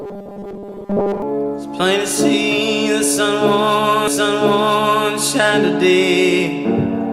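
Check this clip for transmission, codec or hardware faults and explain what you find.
Two faults are present. From 0.01 to 1.22 s there is robotic sound from repeated short buffers: a rigid 200 Hz buzz. The likely cause is a starved stream repeating a 5 ms buffer for most of that stretch, stamping its period onto the sound. On a spectrogram this appears as evenly spaced horizontal harmonic lines at multiples of 200 Hz, and the waveform shows identical 5 ms cycles.

From 4.07 to 5.07 s, a stream segment is repeated: one second of programme plays again, preceded by a small blip where playback jumps back. This happens when the same segment is fetched or queued twice. On the waveform, the second-long block visibly duplicates the one before it, with a discontinuity at the seam, and the spectrogram shows the same pattern twice in a row.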